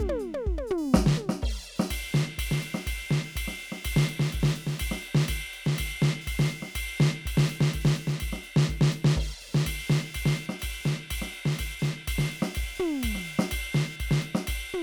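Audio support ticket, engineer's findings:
Computer activity noise under the music, present throughout: buzzy chirping, pulse rate roughly 500 Hz, about 30 dB below programme, tracking machine activity, not the sound. Processor, graphics or mouse load shifting shared audio ground. Spectrogram: fine harmonic comb, bursty vertical striations.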